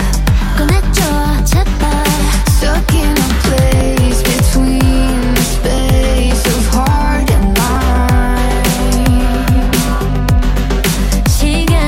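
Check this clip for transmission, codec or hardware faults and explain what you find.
There is one fault: audio missing between chunks. The sound skips at 3.81, 5.78, 7.76 and 9.73 s, roughly every two seconds. At each point a few tens of milliseconds of audio vanish. The material on either side is butted together with no gap of silence, so the flow jumps forward abruptly. The steady spacing points to a recorder or processor handling audio in blocks of about 2 s. It likely drops a short slice each time it closes one block and starts the next.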